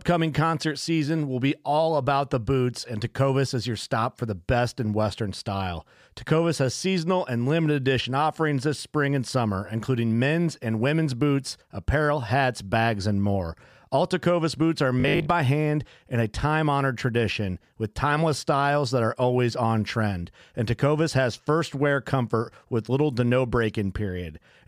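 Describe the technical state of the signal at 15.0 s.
From 15.00 to 15.34 s the speech becomes a rigid metallic buzz near 50 Hz: robotic sound from repeated short buffers, likely a starved stream looping 20 ms segments, roughly half the audio replaced.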